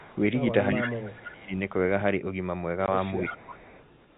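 Speech over a telephone-band link, with nothing above 4 kHz. A far-end echo canceller likely let some of its loudspeaker pickup through, producing an echo leak: a copy of the speech delayed by 335 ms at 0.0–0.2, 0.82–0.89, 1.05–1.1 and 1.28–1.41 s, and again from 3.28 s to the end. It ranges from a faint trace to nearly as loud as the speech itself, strongest around 0.85 s. When both sides talked at once, the canceller likely turned the local talker down as well, so speech is suppressed in double talk. The speech sinks by up to about 25 dB across 0.72–1.53 s and dips by about 10 dB at 3.19–3.42 s. Packet loss filled with silence leaves a hard-edged 20 ms hole at 2.86 s, which fits a single lost packet.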